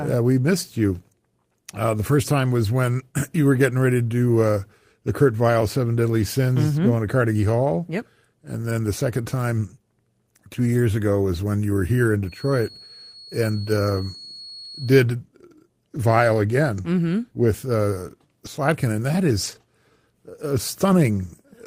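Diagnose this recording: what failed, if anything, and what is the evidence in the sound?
A feedback whistle, likely from a loudspeaker-to-microphone loop, runs from 12.22 to 14.99 s after "you were here in". It shows as a steady 4.4 kHz spectrogram line about 20 dB below the sound.

At the network stage, a lost packet was rebuilt from error correction at 19.43 to 19.61 s, after "and that". About 100 ms of rougher, noisier audio, which fits five packets, appears as smeared spectrogram texture without a waveform gap.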